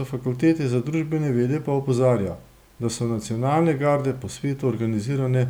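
No technical faults can be heard anywhere in this recording; the signal stays steady and intact throughout.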